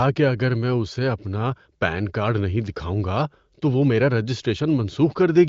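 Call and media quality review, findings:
Faint, evenly spaced ticks, near a soft rattle, 0.11 to 5.45 s, roughly every 70 ms, about a hundred in all, clearest where the speech is loudest. Clock slip clicks, likely two unsynchronised device clocks about 300 ppm apart, each slip dropping or repeating one sample as the offset reaches a whole sample. Carried over the AMR wideband (HD Voice) codec at a high rate, band ending near 7.5 kHz.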